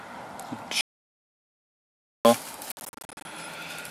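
From 0.81 s to 2.25 s the sound cuts off abruptly into 1.44 s of dead digital silence, with no room tone underneath, then resumes mid-flow. This is an audio dropout to silence, likely the input being lost while the recorder kept writing silence.

Between 2.72 s and 3.25 s the audio stutters through a cluster of short holes, about 320 ms missing across 533 ms, the longest gap 53 ms. This is a Bluetooth dropout, likely packets arriving too late and being discarded.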